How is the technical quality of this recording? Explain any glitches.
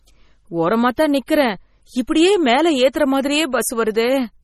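The quality is pretty rough: the whole clip has a heavily compressed sound, and there are three short pre-echo smears on attacks.

Throughout, nothing comes through above about 13.9 kHz, and the speech has a watery, swirly edge with chirpy sibilants. That's likely MP3 compression at a low bitrate, around 32 kbps. The encoder cuts the top end and switches weak frequency detail in and out from frame to frame.

The pre-echo lands at 0.96 s, 1.26–1.28 s just after "ஓரமா தான்", and 2.07 s, spreading roughly 12 to 21 ms ahead of each attack. The codec spreads its noise across a whole block, so a short hiss leaks in before each sharp onset, which then sounds softened.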